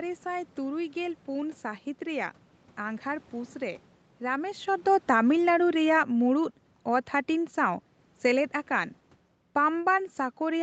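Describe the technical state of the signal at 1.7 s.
The audio at 1.7 s is intact, with no fault present at that moment.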